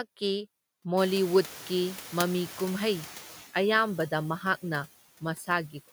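Noise suppressor artifacts run through the whole speech clip. The suppressor pulls the background down by about 10 dB, frame by frame, so the noise dips between phrases and swells back under the voice.

Around 1.0 s the room noise jumps by about 22 dB, settling roughly 19 dB under the speech. From 0.97 to 3.41 s you hear the noise suppressor catching up. Its noise estimate lags, so the louder noise comes through with little reduction at first. Over about 2.4 s it sinks by about 8 dB, and it has settled by the time "ꯑꯌꯥꯝꯕꯗ ꯃꯍꯥꯛꯅ" begins.

Right after the final "ꯑꯌꯥꯝꯕꯗ ꯃꯍꯥꯛꯅ", between 5.21 and 5.49 s, there's speech cut by the noise suppressor. It mistakes part of the voice for background and turns it down by as much as about 9 dB. Roughly 150 ms of sound gets swallowed and goes faint.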